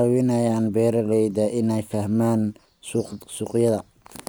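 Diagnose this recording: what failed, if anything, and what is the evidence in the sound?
Nothing failed; no faults heard.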